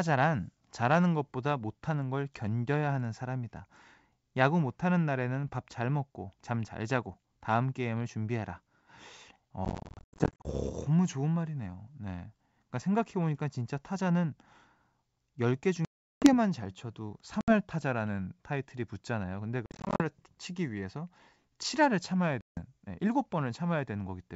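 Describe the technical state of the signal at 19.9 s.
Packets are being dropped on this ADPCM call from 19.66 to 20.02 s, about 230 ms lost in gaps up to 50 ms, and the decoder's predictor and step size drift from the sender's. Speech breaks into hard-edged silences, resuming slightly distorted.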